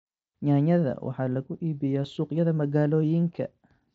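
A speech clip over a Bluetooth mSBC headset link, where one voice packet of about 7.5 ms was lost at 2.04 s, just after "waxaa lagu", and the receiver filled the gap by repeating a closely matching stretch of the preceding waveform. This concealed Bluetooth headset packet loss leaves only a faint blip, barely audible against the light grain of the codec.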